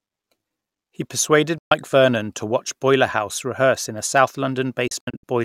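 At 1.58 s the speech cuts out for 128 ms in a digital broadcast dropout: the receiver stopped getting good frames and muted, with a 3 ms fade. From 4.88 to 5.24 s it stutters through several short holes, the longest 64 ms, losing 192 ms of programme.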